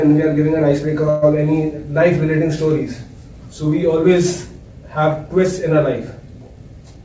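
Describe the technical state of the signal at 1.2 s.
At 1.2 s there is a call audio freeze from 1.10 to 1.25 s: the last sound is stretched into a fading buzz for about 120 ms, likely a jitter buffer running empty, then resumes without loss.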